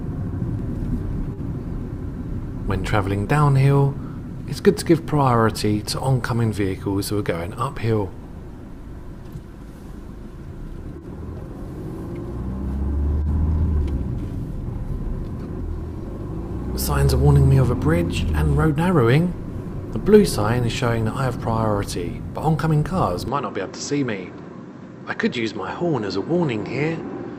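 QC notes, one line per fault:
23.28–27.39 s, input switched to a poorer device: sound turns abruptly duller and about 5 dB quieter, nothing above 7.8 kHz, faint new background noise; likely a microphone change.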